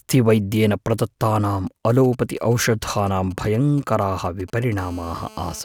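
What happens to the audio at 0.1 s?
Nothing goes wrong at 0.1 s; the speech plays through intact at that moment.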